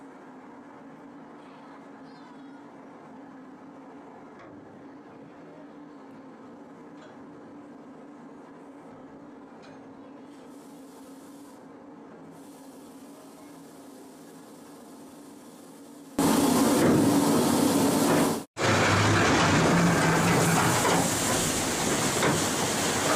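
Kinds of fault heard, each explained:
One channel inverted, 0 to 16.19 s: the sound drops about 25 dB to a faint residue, likely from one channel's reversed polarity cancelling shared content in mono.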